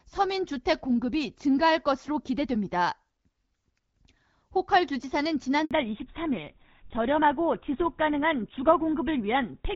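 At 5.65 s there's a handover gap of about 60 ms, where the call switches networks, no speech frames get through, and the speech simply drops out. Right after, at 5.71 s, comes a fallback to narrowband. The clear HD Voice sound before it gives way to audio with nothing above 4 kHz, duller and rougher, consistent with GSM full rate.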